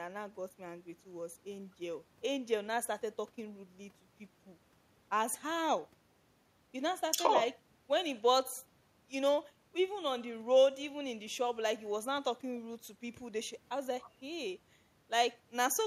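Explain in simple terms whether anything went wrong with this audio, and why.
Nothing went wrong here.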